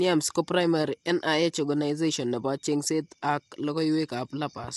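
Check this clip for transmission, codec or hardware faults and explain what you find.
There is one fault, present throughout. Low-delay AAC compression is likely. Short frames blur the harmonics, adding grainy roughness and noise between them. Nothing sounds above 11.6 kHz, which fits a bitrate near 32 kbps.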